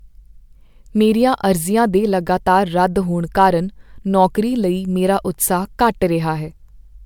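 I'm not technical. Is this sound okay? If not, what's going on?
No, not quite. The speech has generation loss throughout: it sounds swirly and hollow, and the starts of sounds are blurred. That's likely from being saved as MP3 a few times over, with each save smearing things a little more.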